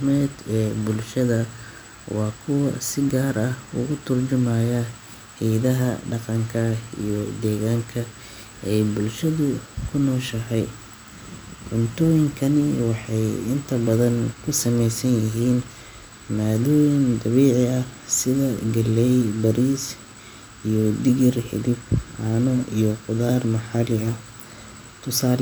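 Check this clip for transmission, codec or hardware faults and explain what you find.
No transmission, codec or hardware problems can be heard anywhere in this speech recording, and the signal stays continuous and steady throughout.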